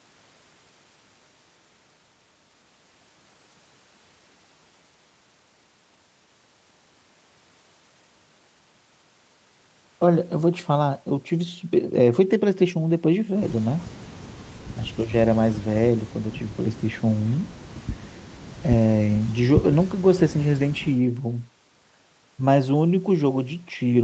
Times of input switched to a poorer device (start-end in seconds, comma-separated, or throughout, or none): none